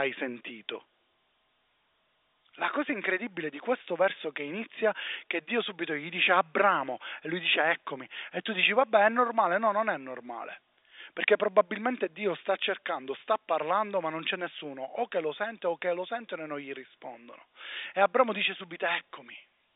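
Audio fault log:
Nothing in this speech clip registers as a fault. The G.711 telephone coding path can be heard as a narrow line band running from about 300 Hz to 3.7 kHz.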